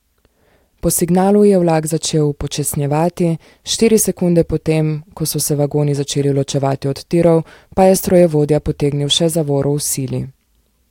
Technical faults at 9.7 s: none

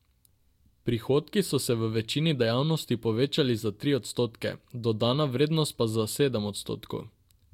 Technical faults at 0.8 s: none

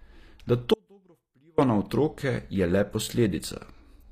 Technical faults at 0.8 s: HE-AAC compression; audio dropout to a faint residue

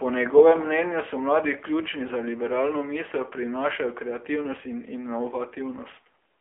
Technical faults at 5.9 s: AMR narrowband mobile codec

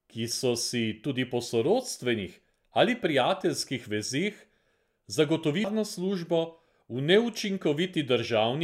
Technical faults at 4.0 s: none

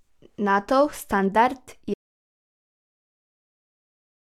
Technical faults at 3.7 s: audio dropout to silence

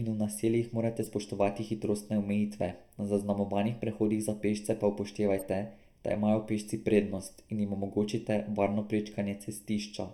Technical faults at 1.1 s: channel delay (comb filtering); corrupt frame decoded

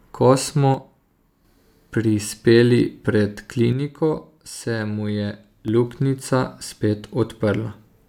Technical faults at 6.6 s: none

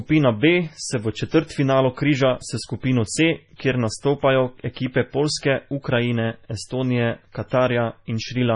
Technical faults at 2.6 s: MP3 compression

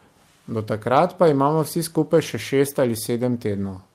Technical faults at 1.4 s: none

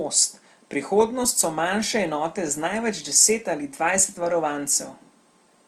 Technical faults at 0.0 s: none

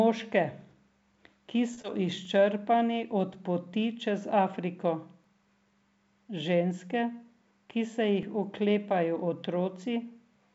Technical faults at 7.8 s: jitter buffer speed-up

